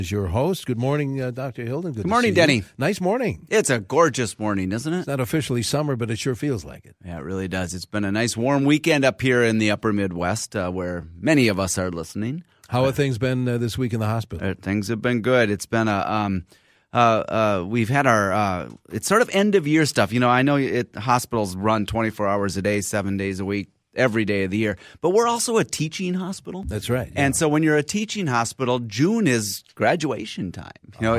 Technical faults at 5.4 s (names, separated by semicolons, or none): none